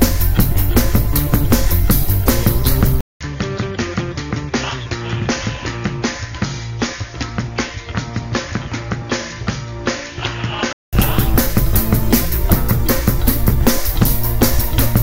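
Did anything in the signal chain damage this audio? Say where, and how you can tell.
Yes. At the driver level, the input likely switched to a poorer device between 3.01 s and 10.93 s. After a 200 ms silence, nothing passes above 6.9 kHz, the level drops about 10 dB and new noise sits roughly 30 dB below, so the sound turns dull and boxy.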